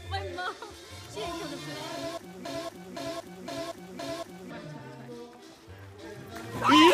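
From 2.45 to 4.51 s the sound gets stuck in a broken-record loop: a 513 ms fragment plays back to back four times, identical each pass, and whatever should have come through then is simply gone. Most likely the player or stream stalled and kept resending its last buffer.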